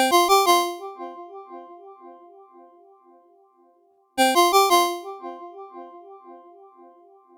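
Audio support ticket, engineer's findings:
Short stall from a late packet, 3.91–4.00 s: jitter buffer ran dry, receiver held the last sound about 64 ms, then resumed. Nothing lost, playback now 64 ms later.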